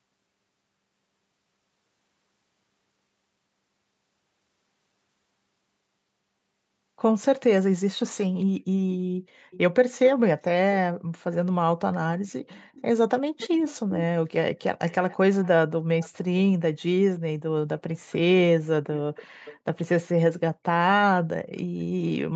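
Echo leak at 9.51–9.58, 12.27–12.82, 13.38–13.91, 14.6–15.48, 16.0–16.1 and 18.97–19.58 s: a faint copy of the speech returns 341 ms late, loudest near 13.4 s at about 15 dB down. This is likely a far-end loudspeaker echo that the echo canceller failed to remove.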